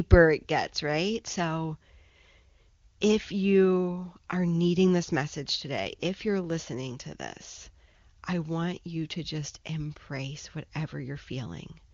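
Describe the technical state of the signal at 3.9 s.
At 3.9 s the speech is intact, carried cleanly through the AMR wideband (HD Voice) codec at 23.85 kbit/s with no fault at that moment.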